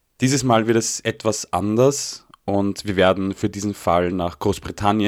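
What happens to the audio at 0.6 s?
Nothing goes wrong at 0.6 s; the speech plays through that moment intact, with no dropout, click or distortion.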